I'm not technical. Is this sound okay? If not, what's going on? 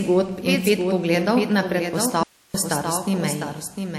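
No. Throughout, the speech has a second, somewhat quieter copy trailing about seven-tenths of a second behind, a doubled audio track, likely from the sound being recorded twice or two out-of-step copies being mixed together.

From 2.23 to 2.54 s the speech abruptly cuts to just hiss, an audio dropout to a faint residue, likely because the signal was lost while the recording kept running.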